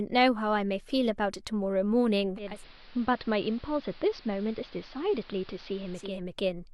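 This speech clip has digital radio blending to analogue from 2.36 s to 6.23 s: a 286 ms cross-fade to the AM broadcast dulls the treble and brings in hiss well below the speech, with no level change, before blending back.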